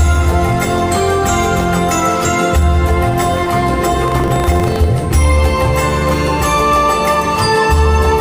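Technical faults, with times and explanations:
4.00–4.88 s, buffer tearing: the writing program and the playback hardware have drifted out of step, so their positions cross within each period, and a small slice of every buffer carries stale audio from roughly 70 ms earlier, spliced in with abrupt joins at both ends. Those discontinuities repeat at 25 Hz, matching a buffer period of 40 ms, and produce a steady robotic rattle that tracks the sound's level and disappears when the signal does.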